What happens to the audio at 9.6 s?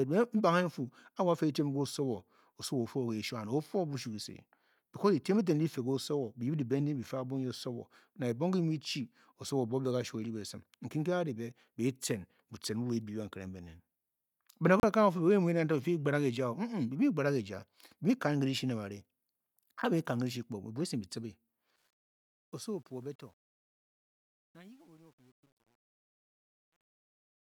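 Nothing goes wrong at 9.6 s; the speech there is intact, with no dropout, click or other fault.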